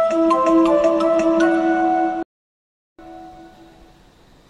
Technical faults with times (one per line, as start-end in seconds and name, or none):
2.23-2.99 playback stall